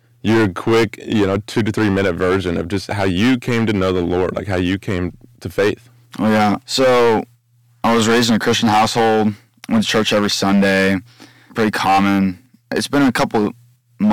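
Hard clipping runs through the whole clip: the speech reaches some stage about 16 dB hotter than it can pass, so around a tenth of the samples have their peaks sliced flat. Those flattened tops spray high harmonics, giving a harsh fuzz on every loud syllable.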